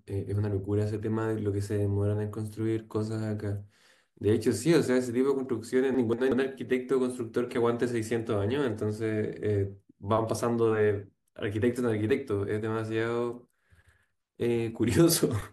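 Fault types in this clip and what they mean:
Chunks out of order: around 5.94 to 6.32 s, a roughly 186 ms block of the speech plays one block late, swapped with its neighbour. Nothing goes missing, but the order jumbles for a moment, with three abrupt joins.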